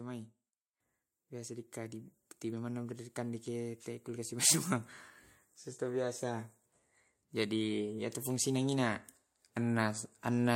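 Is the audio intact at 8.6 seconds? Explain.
No. At 8.6 seconds the clip is inside an automatic gain rising episode from 7.18 to 9.04 s: the gain control judged the input too quiet and raised its gain by about 4 dB, so the speech and background noise swell together gradually.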